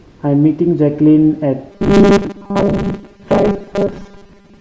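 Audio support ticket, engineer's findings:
Robotic sound from repeated short buffers, 1.71 s to end of clip. Speech collapses into a rigid metallic buzz at 200 Hz, while syllables still roughly track. Likely cause: audio delivery starving the output stage, which loops a 5 ms segment for most of that stretch while real audio is skipped. Unlike a codec or vocoder artefact, the buzz rate stays locked to the loop length.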